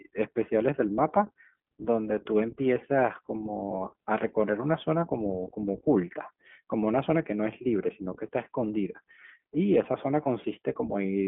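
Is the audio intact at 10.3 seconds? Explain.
No. A lost iLBC frame falls at 10.24 to 10.28 s, just before the point asked about. One packet went missing, and the decoder filled a gap that fits a single 20 ms frame by repeating the last pitch cycle blended with noise. That brief stretch comes out as a held, faintly buzzy, breathy vowel-like sound. Because each iLBC frame is decoded independently, the speech snaps back cleanly right after the gap.

The iLBC codec also affects the whole clip, including this moment. Its frame-by-frame coding of the excitation signal, at a rate that fits iLBC's 15.2 kbps mode with 20 ms frames, gives the speech a plainly audible rough, slightly synthetic texture. The line band runs from 150 Hz to 3.5 kHz, so the low end is thin and nothing above 3.5 kHz comes through. Sibilants and other high detail sound dull and boxy.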